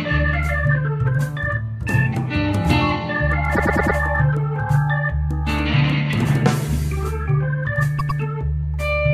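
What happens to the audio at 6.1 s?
Nothing goes wrong at 6.1 s; the music plays through that moment intact, with no dropout, click or other fault.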